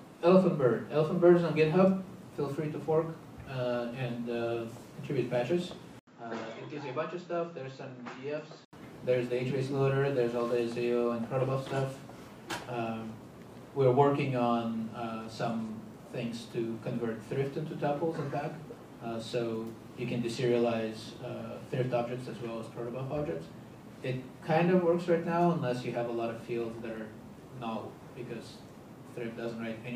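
Input switched to a poorer device, from 5.99 to 8.73 s: after an 80 ms silence the sound turns dull, drops roughly 10 dB, loses everything above 7.6 kHz and gains a faint new noise floor, likely from a narrower-band microphone, then clears again.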